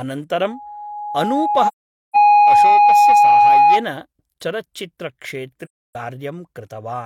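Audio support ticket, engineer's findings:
Loudspeaker feedback squeal, 0.42–3.85 s. Mic picking up its own loudspeaker; loop gain above unity at 829 Hz. Tone swells over about a second and a half to roughly 15 dB above the speech. Spectrogram: single bright horizontal line at 829 Hz, thickening as it builds.

AAC frame loss with muting, 1.67–2.16 s and 5.65–5.95 s. Decoder zeroing lost frames; overlapping windows fade out and in. Gaps of 0.47 s and 0.30 s, lengths fitting about eleven and seven frames. Waveform: tapered flat holes. Spectrogram: full-band blank columns, squeal included.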